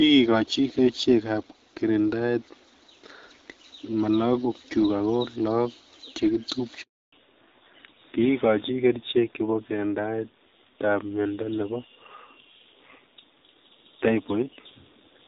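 A handover gap hits this speech recording at 6.82 s and lasts 300 ms, to 7.12 s. As the call is passed from one network link to another, no speech frames get through during the switch, so the voice fades out within a few tens of milliseconds and stays silent until the new link comes up, taking whatever was said in that window with it. Fallback to narrowband follows directly at 7.12 s and persists to the end. Before it, the audio has the brighter, fuller sound of HD Voice, consistent with AMR-WB at around 12.65 kbit/s with only light coding damage. After it, nothing remains above 4 kHz, and the voice turns duller and rougher. That fits a drop to the older AMR narrowband codec at a low rate, around 7.4 kbit/s, which carries only the telephone band.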